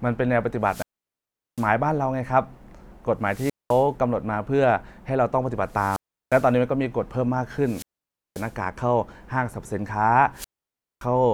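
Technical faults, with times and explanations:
0.63–1.71 s, 3.24–3.87 s, 5.67–6.55 s, 7.59–8.56 s and 10.34–11.06 s, wireless microphone squelch dropout: the analogue FM link from the transmitter weakens until the receiver's squelch gate shuts its output. Each event brings a brief surge of hiss as the signal fades, then a near-silent gap of 0.75 s, 0.21 s, 0.36 s, 0.54 s and 0.57 s respectively, before the squelch reopens and the speech returns.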